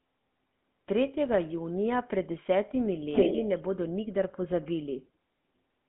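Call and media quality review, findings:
GSM full-rate codec damage, whole clip. Buzzy, gravelly roughness on all speech, plainly audible. Band limited to 150 Hz to 3.4 kHz, nothing above 3.8 kHz. Pulse-driven vocal-tract model with sparse excitation, which fits 13 kbps full-rate coding. Component: call leg codec.

Echo leak, 3.1 to 3.62 s. Delayed copy of the speech, lagging about 306 ms, roughly 5 dB louder than the talker. Likely cause: far-end loudspeaker pickup not fully removed by its echo canceller. Component: remote AEC.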